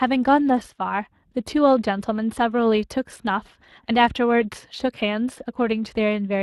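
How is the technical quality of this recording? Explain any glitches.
The technical quality is compromised: the speech carries plainly audible Speex codec damage for the whole clip.

Speex codec, throughout: the speech sounds noisy and hoarse, which fits a bitrate around 22 kbps. This CELP coder rebuilds each frame from a predicted excitation, and with this few bits the excitation is coarse. On a spectrogram, voiced harmonics look smeared and grainy.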